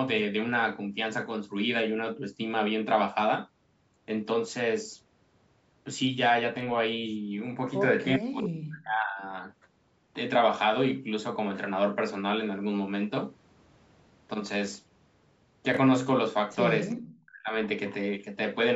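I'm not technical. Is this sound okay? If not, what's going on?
No, there are a few problems. From 8.18 to 9.32 s and again from 17.11 to 17.53 s, the voice nearly drops out in pieces. That's likely speech suppressed in double talk, where the call's echo canceller turned the talker down while both sides spoke at once. At 15.72 to 15.77 s there's a brief jumbled moment from chunks out of order, where a tiny slice of audio plays one step late. Around 16.91 to 17.02 s a faint, delayed copy of the voice comes back about 0.4 seconds late, likely an echo leak from a speakerphone.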